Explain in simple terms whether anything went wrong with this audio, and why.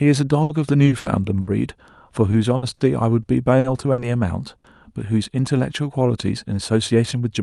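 Repeated packet loss (robotic sound) occurs from 0.43 to 1.50 s and again from 2.31 to 4.67 s. Chunks of the call's audio data went missing, four times in the first stretch and seven in the second. The receiver patched each hole by stretching the last bit of sound, which makes the speech choppy and robotic, with brief pieces missing.

Jitter buffer speed-up runs from 6.42 to 7.31 s. Too much audio had piled up waiting to be played, so the receiver trimmed tiny slices, roughly a tenth of a second in total. The speech plays about 9% faster at the same pitch and sounds hurried.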